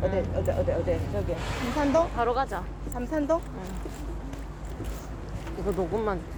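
A ground loop or a nearby transformer has coupled the 50 Hz power line into the signal path, producing mains hum from start to finish: a steady low drone with a few low harmonics, sitting only around 10 dB beneath the sound itself.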